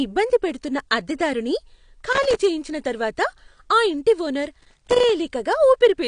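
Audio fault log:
throughout: AAC compression. The speech sounds plainly coded and dull, with nothing above 9.8 kHz. The likely cause is low-bitrate AAC-LC, which fits a 32 kbps stream: its frequency lines are quantised coarsely against a hearing model, lowering the cut-off and smearing detail.
2.13–2.41 s and 4.60–5.09 s: loose connector crackle. There are two irregular bursts of crackle, about 0.28 s and 0.50 s long. A worn or dirty contact rapidly makes and breaks as it shifts, chopping the signal on and off and producing the scratchy texture.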